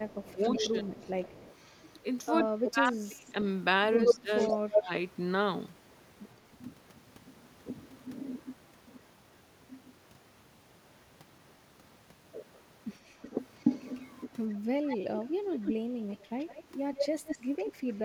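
From 0.0 to 1.12 s the speech dips by up to about 20 dB. This is speech suppressed in double talk, likely because the echo canceller turned down both sides while they overlapped. An echo leak runs from 0.09 to 2.0 s. A copy of the speech trails by 117 ms, about 15 dB below the direct sound. The likely cause is a loudspeaker echo the canceller did not fully remove. Suppression returns at 2.51 to 3.28 s, about 25 dB deep. From 4.05 to 4.8 s the echo leak comes back at 125 ms delay, now about 5 dB louder than the speech. Suppression overlaps it from 4.12 to 4.91 s, about 15 dB deep. From 13.6 s to the end, a 150 ms echo sits about 5 dB under the speech. Short dropouts cut in at 14.55 to 14.73 s, about 30 dB, and at 15.37 to 15.48 s, about 20 dB.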